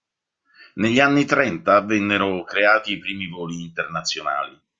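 No technical faults can be heard anywhere in the recording; the signal stays continuous and steady throughout.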